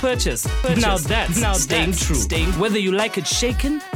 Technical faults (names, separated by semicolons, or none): doubled audio track